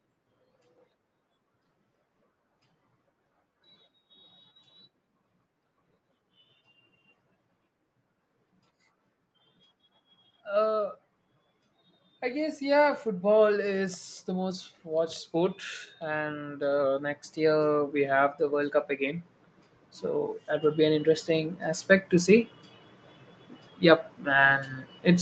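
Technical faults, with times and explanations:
12.2 to 22.52 s, automatic gain rising: the call's gain control judged the input too quiet and raised it by about 16 dB over roughly ten seconds. Voice and background noise swell together, unlike compressor pumping, which acts quickly and lifts background only between phrases.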